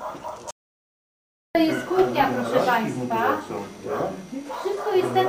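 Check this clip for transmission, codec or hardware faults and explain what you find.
One fault is present: an audio dropout to silence from 0.51 s to 1.55 s. The input signal was likely lost for that stretch, through a disconnected device, a broken link or an accidental mute, while the recorder kept writing silence. The sound cuts off abruptly mid-flow, leaving about 1.04 s of total silence with no room tone or noise floor, then resumes just as suddenly. Whatever occurred during that gap is missing from the audio.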